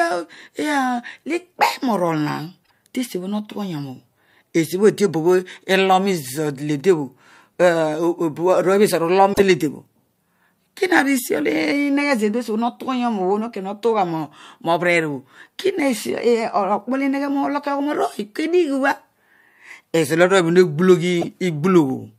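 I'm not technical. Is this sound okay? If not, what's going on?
No. This speech has damaged data in a compressed stream at three points: 2.61 to 2.71 s, 9.30 to 9.40 s, and 21.21 to 21.24 s. Each is a brief chirp, squawk, click or short hole. The file is stored in a packed, compressed form. Here a few pieces of it got garbled. The player can't read those bits properly. It loses its place and hunts for the next clean spot. That search is the odd noise you hear.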